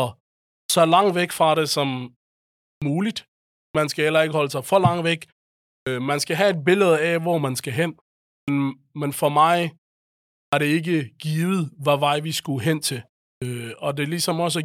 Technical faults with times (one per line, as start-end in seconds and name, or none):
0.58-0.70 clipped start after a pause
2.71-2.82 clipped start after a pause
3.64-3.75 clipped start after a pause
5.76-5.86 clipped start after a pause
8.36-8.48 clipped start after a pause
10.42-10.53 clipped start after a pause
13.31-13.42 clipped start after a pause